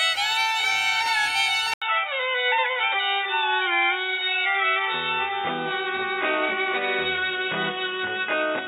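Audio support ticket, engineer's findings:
Music goes dull and boxy at 1.74 s and stays that way to the end, after a short gap of about 80 ms. Nothing above 3.8 kHz from there on. A new noise floor sits roughly 40 dB under the music, with no real level jump. Likely an input switched to a poorer device mid-recording, since a narrower-band mic or headset path brings its own noise.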